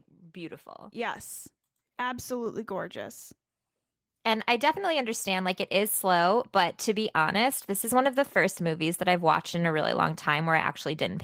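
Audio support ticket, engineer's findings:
Microphone volume stepped up at 2.46 s. Speech and room background jump together by about 4 dB in one hit, then hold the new level. Probable component: the call app's auto input-gain logic bumping the device's input volume. Mechanism: the app judged the mic too quiet and raised the hardware gain in a single step instead of ramping it.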